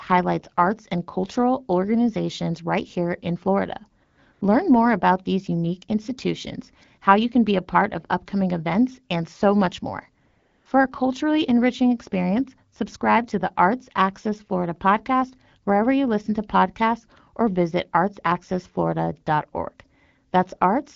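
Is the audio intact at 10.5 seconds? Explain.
No. AMR comfort noise covers 10.27 to 10.65 s, a gap of about 380 ms. It falls right after "and so much more" and before "a culturally enriching experience". The phone judged the talker silent and stopped sending speech frames. The receiver then filled the pause with synthetic noise, built from a rough description of the background's level and spectrum. The real background drops out. A steady, smooth noise switches in and then out again.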